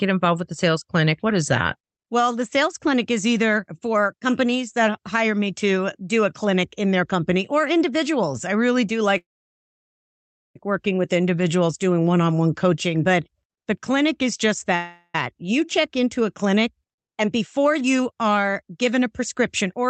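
At 9.17 s, right after "individuals I really do", a call audio freeze stops the speech for 1.38 s, likely because delayed packets left the jitter buffer empty. A brief decaying buzz trails off into about 1.31 s of silence, a flat line on the waveform and a blank column on the spectrogram, before "working with" resumes exactly where it stopped. A second freeze at 14.75 s, after "the clinic is just", holds for 0.39 s as a fading buzz that shows as smeared, sustained bands, with only about 30 ms of true silence.

From 16.94 s to 19.84 s, between "check into a clinic" and "a plan", a jitter buffer speed-up trims pitch-period-sized slices over and over, removing roughly a fifth of a second. The speech runs at 106% speed and sounds slightly hurried. On the spectrogram the harmonic spacing stays constant while the syllables crowd closer together, all below the Opus band edge at 8 kHz.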